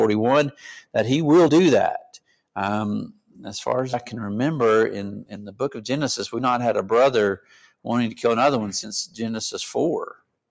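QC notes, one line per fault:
Throughout: noise suppressor applied to music or sounds. A speech-tuned suppressor stays active and treats steady tones, ambience and tails as noise, so the level keeps swinging by roughly 5 dB. Attacks get through, sustained parts sag, giving a pumping, thinned feel.
2.03–2.56 s, 3.12–3.41 s, 7.37–7.87 s, 10.12–10.36 s: sound cut by the noise suppressor. The suppressor misreads these held or decaying stretches as noise and clamps them hard, down about 21 dB at the deepest (about 16 dB at 7.37 s). They sink or get their tails chopped.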